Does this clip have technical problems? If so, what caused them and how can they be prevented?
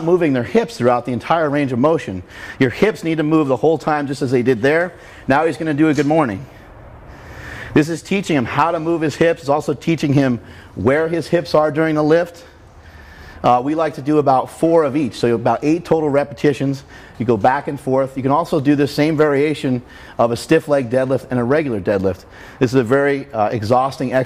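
No, nothing technical goes wrong in this one, so there's nothing to trace back or guard against.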